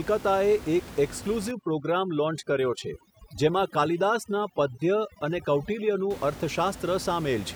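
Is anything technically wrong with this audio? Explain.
Yes. From 1.51 s to 6.10 s the speech suffers from overdone noise removal. A noise reduction stage has been pushed too hard against room noise sitting about 15 dB below the speech. It cuts individual frequency bands deeply whenever they look like noise. Quiet parts of the voice fall below that threshold and vanish too. The background drops and breaks up into twinkling, warbling specks.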